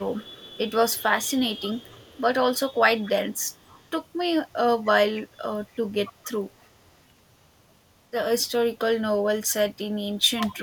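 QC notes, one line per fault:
0.00–2.22, 2.58–4.07, 4.48–4.53, 4.84–5.33 and 5.65–7.03 s, echo leak: a faint copy of the speech trails the original by 271 ms, roughly 20 to 40 dB down. It is likely a loudspeaker echo the far end's canceller missed; a fixed delay and a separate copy set it apart from room reverberation.
10.35–10.63 s, speech suppressed in double talk: the speech drops by as much as about 20 dB for roughly a third of a second, likely because the echo canceller treated the talker as echo while both sides spoke. It is a brief duck with no delayed copy, unlike echo leak.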